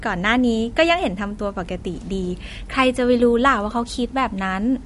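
From start to end, the speech sounds watery and swirly, with metallic chirps on s sounds and nothing above 11.2 kHz. This is likely MP3 compression at a low bitrate, around 48 kbps. A plain low-pass filter only dulls the sound, but here weak components flicker between frames.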